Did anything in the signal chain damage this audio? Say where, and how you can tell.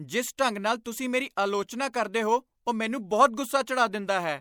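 Yes. The damage happened at the codec stage. Pre-echo appears at 0.37 s and again at 0.84 s, just before "ਤੁਸੀਂ ਮੇਰੀ ਆਲੋਚਨਾ ਕਰਦੇ". Each time, a short hiss of about 14 ms comes before a sharp onset, and the onset sounds softened. The transform codec sized its quantisation noise for the loud attack. It then spread that noise across the whole block, so it leaked into the quiet gap ahead of the attack.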